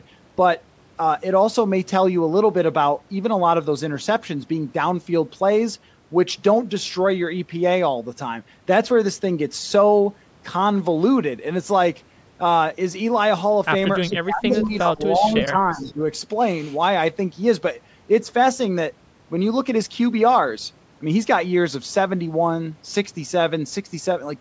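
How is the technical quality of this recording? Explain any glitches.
The recording has two call-related glitches, both between about 14 and 16 seconds, where far-end echo and both talkers overlapping collide. Content reaches up to 8 kHz, consistent with a call microphone chain.

Echo leak: likely a loudspeaker on the far end whose echo canceller failed to fully remove the returned signal. Short delayed copies arrive 354 ms late, about 20 to 25 dB below the speech, at 14.04–14.13, 14.50–14.71, 15.23–15.30 and 15.76–15.93 s.

Speech suppressed in double talk: with both sides speaking at once, the echo canceller likely could not separate the local talker from echo and turned everything down. The voice dips by up to about 20 dB from 14.05 to 15.01 s, then by about 10 dB from 15.18 to 16.01 s.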